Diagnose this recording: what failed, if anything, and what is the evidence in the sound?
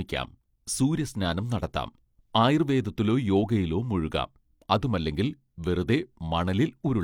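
Nothing failed: no stage in the chain, from capture through conversion, transport and playback, leaves an audible fault anywhere in this speech recording.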